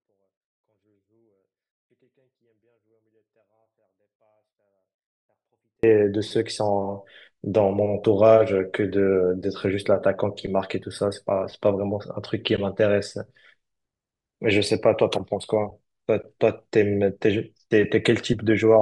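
A 24-bit alignment error affects this speech: 24-bit samples in 32-bit words are read as full 32-bit values, so from 0.0 to 5.83 s the sound stays clean but drops about 48 dB, nearly inaudible.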